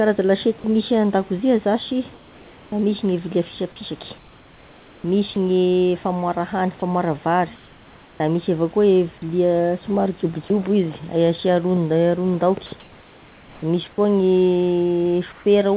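Speech carried over a call path that passes nothing above 4 kHz, with comfort noise in place of the background at 2.14–2.72, 4.18–5.36, 7.56–8.2, 12.8–13.98 and 15.32–15.46 s. In each pause the room's textured background turns into a flat, featureless hiss, about 1 to 3 dB quieter where the change is measurable, likely because the sender's voice detector stopped transmitting and the receiver synthesised noise. Sound dropped by the voice detector is different because wanted sound itself is lost rather than only background. At 5.34, 9.18–9.22 and 10.48–10.5 s, 10 to 20 ms of the sound is cut away and replaced by that same steady noise, likely as the detector mistook it for background.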